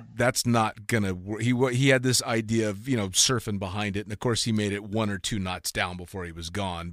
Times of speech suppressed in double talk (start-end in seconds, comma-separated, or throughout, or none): none